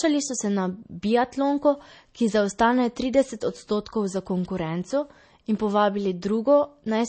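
Heavy MP3 compression is the likely cause of the damage running through this speech recording, from start to finish, and the degree of it points to a low bitrate around 32 kbps. Starved of bits, the encoder has cut everything above 8.3 kHz, leaving the sound dull and closed-in, and has dropped quieter frequency lines that flicker in and out between frames. The result is a plainly audible watery, swirling texture, with metallic chirps on s sounds and smeared attacks.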